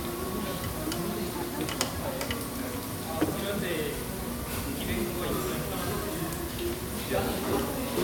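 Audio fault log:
No faults are heard anywhere in this recording of sounds. Nothing in the audio calls for a timed entry.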